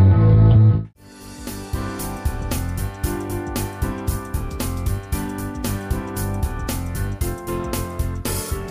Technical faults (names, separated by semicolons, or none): none